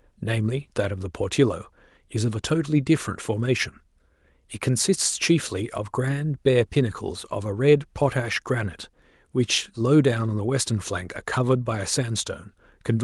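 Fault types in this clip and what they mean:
Nothing stood out on listening to the speech in this clip.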